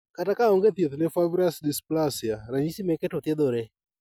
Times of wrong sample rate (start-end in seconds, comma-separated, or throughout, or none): 0.69-2.67